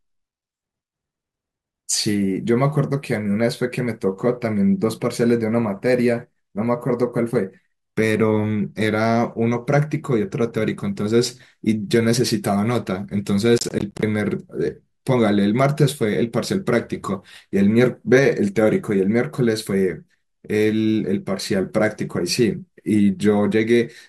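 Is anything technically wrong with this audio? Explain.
Yes. From 13.58 to 14.03 s, processor overload crackle: around twenty missed buffers of roughly 10 ms each fall silent, producing gritty tearing rather than one clean dropout.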